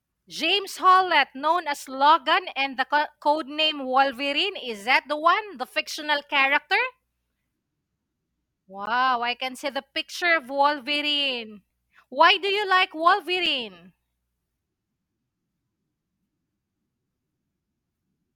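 At 8.86 s, just before "I can see the", and again at 13.46 s after "do you like", there's a block of digital silence: the output briefly cuts out with no fade.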